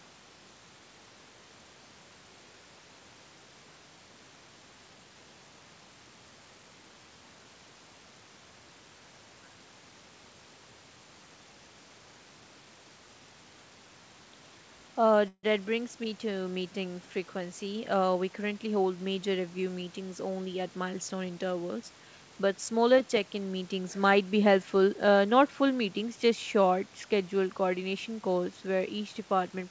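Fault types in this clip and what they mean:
Call audio freeze: From 15.28 to 15.45 s the sound stops and the last bit is stretched into a fading buzz, ending in about 50 ms of silence. It then resumes exactly where it stopped, likely because delayed packets emptied the jitter buffer. Unlike a dropout, nothing is lost; everything after it arrives 153 ms late.
Jitter buffer speed-up: From 17.34 to 18.98 s the speech runs at about 109% speed while keeping its normal pitch, sounding hurried. Small pitch-period slices, roughly 150 ms in total, are cut out to shrink the delay. Resampling would raise the pitch; this does not.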